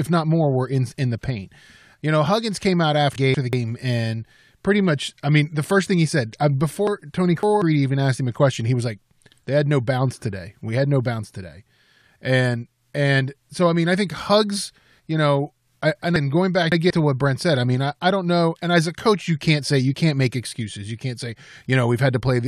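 Chunks out of order at 3.16–3.53 s after "came out", at 6.87–7.62 s after "thing he said uh", and at 16.16–16.90 s after "you know I and". Each time a 186 ms chunk plays late, by one chunk and then by three chunks, so the sound jumbles briefly at the hard joins.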